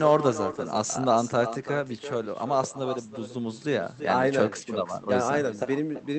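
With no echo canceller on the far end, the speech played from that side's loudspeaker is picked up again by its microphone and sent straight back across the call. Throughout this speech recording, each phrase is followed about a third of a second later by a second copy, about 10 dB quieter, that sounds thinner, so the talker is shadowed by a slapback-like double, on top of an audio band that stops at around 8 kHz.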